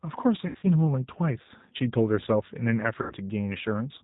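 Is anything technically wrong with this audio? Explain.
Yes, two problems are audible.

Throughout, the speech carries G.729 codec damage. The sound is rebuilt from a vocal tract filter, pitch predictor and sparse pulses, which fits an 8 kbit/s codec. Nothing passes above 4 kHz, so the speech is band-limited and plainly rough and synthetic.

VoIP packet loss concealed by the speech codec occurs at 0.47 to 0.68 s, where 140 ms is lost across 160 ms with runs up to 80 ms, and at 3.02 to 3.14 s, where 80 ms is lost. The decoder extends its last pitch and filter while lowering the gain, giving a buzzy tone or coloured noise that fades. The speech stays weak or distorted briefly after each gap.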